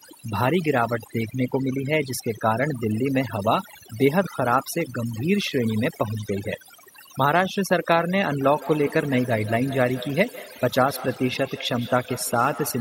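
A speech clip with its background pulled down throughout to near silence that is dotted with twinkling specks. That is overdone noise removal, where a noise reducer is set so hard that individual frequency bands are cut away whenever they sit close to its noise estimate, taking the quieter parts of the speech with them. From 8.43 s to the end, each stretch of speech returns at a steady spacing of roughly 150 ms, with each pass thinner and more ringing than the one before and the loudest repeat sitting about 15 dB below the speech itself. This is feedback echo between two devices, where two devices in the same room have joined one call and one of them plays out what the other's microphone sent. That microphone hears the playback and sends it back around, and neither echo canceller removes it because each one only cancels the sound its own device plays.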